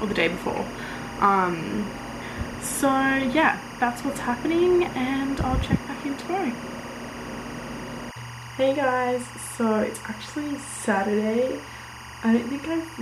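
Timecode bleed runs through the whole clip, from start to finish. A steady chirping warble sits behind the sound. It comes from linear timecode leaking in from a nearby track or cable. That code is a square wave that flips between two pitches, near 1 kHz and 2 kHz. The pattern repeats at 23.976 frames per second. It stays roughly 15 dB below the wanted sound.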